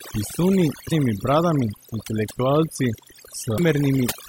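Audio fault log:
Throughout: overdone noise removal. The background drops and breaks up into twinkling specks. A noise reduction stage set far too strongly is switching off individual frequency bands near its noise estimate, taking quieter parts of the speech with them.
0.91 s and 3.58 s: damaged data in a compressed stream. Each is brief, lasting under 20 ms. Corrupted bytes in the compressed stream make the decoder misread those frames, lose sync and search for the next frame header.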